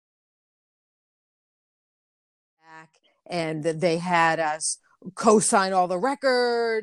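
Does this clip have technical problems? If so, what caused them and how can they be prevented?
No, there are no technical problems in this speech clip. The level rises in a smooth fade-in from around two and a half seconds, reaching full level by 3.86 s with no click or hard edge.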